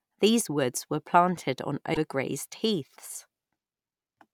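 At about 1.93 s, running to 1.97 s, the speech briefly breaks up and jumps forward: a glitch roughly 40 ms long, about the span of a couple of 24 ms frames. It's most likely a broken MP3 bit reservoir. Some frames seem to have been dropped, so the frame right after the gap reaches back for its borrowed data, picks up bytes from the wrong frame, and decodes garbage until the stream resyncs.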